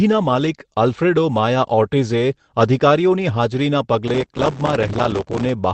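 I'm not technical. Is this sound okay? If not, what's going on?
No, not quite. From about 4.08 to 5.49 s there's processor overload crackle: the computer handling the audio couldn't keep up, so lots of tiny chunks, each just a few milliseconds, came out as silence instead of speech. Strung together, those skips sound like gritty crackling over the voice.

Inside that stretch, around 4.71 to 4.77 s, there's a lost packet rebuilt from error correction, which sounds like a couple of lost pieces of the call. The system filled in about 40 ms from a rough backup copy, so there's no hole, but that moment sounds a bit rougher and noisier.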